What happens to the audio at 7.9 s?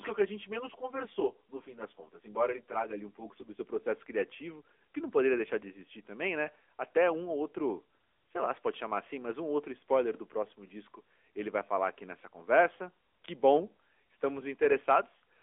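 At 7.9 s the speech is carrying AMR narrowband mobile codec damage, present through the whole clip rather than starting there. The voice is squeezed into a phone band of roughly 300 Hz to 3.4 kHz with nothing above 3.5 kHz, and the vocal-tract model rebuilds it from a few pulses per 5 ms slot, giving a plainly buzzy, synthetic edge that fits a mid-rate mode around 10.2 kbps. That artificial texture is what sets it apart from a simple telephone-band filter, which only narrows the sound.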